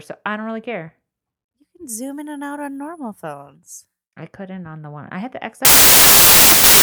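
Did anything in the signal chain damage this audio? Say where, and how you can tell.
Yes. From 5.65 s to the end at 6.83 s the speech collapses into loud, harsh noise, with the voice faintly buried inside and running about 1.33 times too fast and high. This is wrong sample width at the sample-format conversion stage: packed 24-bit data read as 32-bit integers.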